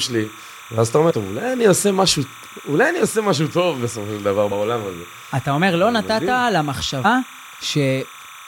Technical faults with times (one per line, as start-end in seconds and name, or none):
0.00-8.48 timecode bleed
1.09-1.12 damaged data in a compressed stream
4.51 damaged data in a compressed stream
7.04 damaged data in a compressed stream